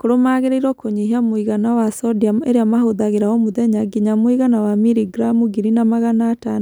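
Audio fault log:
No faults heard anywhere in this speech recording.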